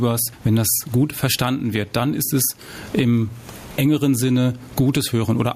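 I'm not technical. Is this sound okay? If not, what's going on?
No. All the way through, the level rises and falls with the speech. The loud and quiet parts also sound squashed to a similar level. This is gain pumping, likely caused by the microphone's volume being set far too high, with an automatic level control quickly and heavily turning it down on each loud sound and letting it back up in the gaps. The room's own background noise is faint.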